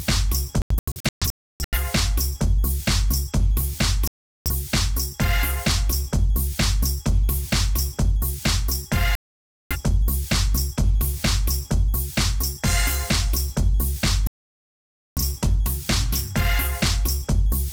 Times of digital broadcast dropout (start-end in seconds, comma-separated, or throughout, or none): 0.62-1.78, 4.07-4.51, 9.15-9.76, 14.27-15.22